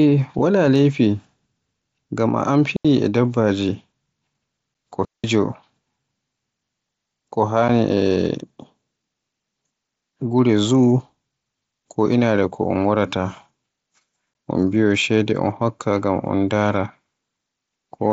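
At 2.76 s a digital wireless dropout mutes the speech for 84 ms, a clean near-silent hole with no noise burst. Too much data was lost on the radio link, so the receiver faded to silence.

At 4.74 s a 7.5 ms gap with abrupt edges is unconcealed Bluetooth headset packet loss. It fits one lost headset packet replaced by silence.

From 5.05 to 5.24 s a second dropout mutes for 191 ms, again a clean hole.

Brief packet-loss holes return at 7.68 s (7.5 ms) and 14.34 s (15 ms, consistent with two packets). Both are abrupt-edged holes through the mSBC wideband headset path.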